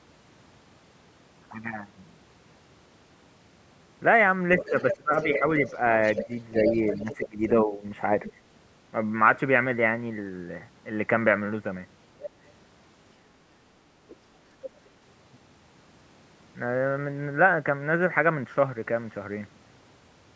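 From 4.57 to 7.48 s a second voice runs under the speech, only about 5 dB quieter. This is the other side's voice leaking through, most likely because the far end's loudspeaker output reached the microphone and the echo canceller failed to remove it. Shorter, fainter scraps of that voice return at 8.25 to 8.32 s, 12.2 to 12.52 s, 14.09 to 14.15 s and 14.63 to 14.8 s, sitting about 15 to 25 dB below the speech.

During that long stretch of leakage the main speech also sags. Between 4.69 and 5.45 s it drops sharply, by roughly 25 dB at the deepest, for about 0.4 s in total. Between 6.59 and 7.84 s it drops again, more gently at about 10 dB, for under a second altogether. This is speech suppressed in double talk, likely caused by both sides talking at once, so that the canceller could not tell its own talker from the echo and turned both down.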